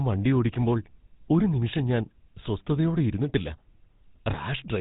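From start to finish the speech carries the sound of the GSM full-rate codec, whose plainly audible roughness fits a rate of around 13 kbit/s. The codec models the vocal tract as a filter and excites it with a coarse, regularly spaced pulse train built from only a fraction of the original excitation, which produces the buzzy, gravelly texture. On a spectrogram the energy stops abruptly at 4 kHz throughout, and the harmonics below look grainy rather than cleanly striated.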